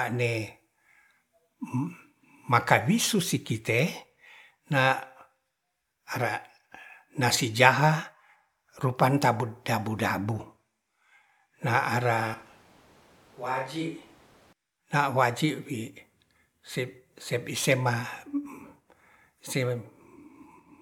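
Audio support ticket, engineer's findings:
Speech turns abruptly roomy and hollow at 12.34 s, bass thinned, level around 10 dB down, room noise rising to roughly 25 dB below speech, snapping back at 14.53 s. Likely a switch to a distant microphone after the close mic's feed dropped.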